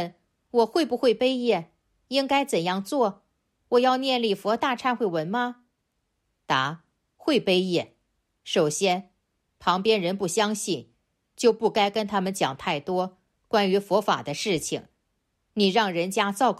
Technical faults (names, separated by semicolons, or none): none